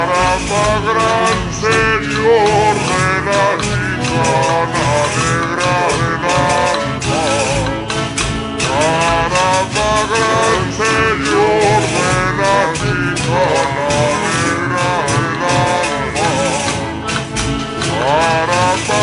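The whole clip suffers from a wrong sample rate, running at two-thirds speed and about seven semitones low, which fits 48 kHz audio played back at 32 kHz.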